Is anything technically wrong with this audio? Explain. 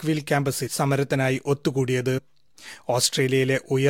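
Yes. The speech has compressed frames skipped twice, at about 0.66 to 0.68 s and at about 2.17 to 2.19 s. Whole blocks of encoded audio never reached the output. They were lost from the file or rejected by the decoder as damaged. The speech jumps forward, roughly a tenth of a second at the first point and somewhat less at the second. That fits several frames dropped each time.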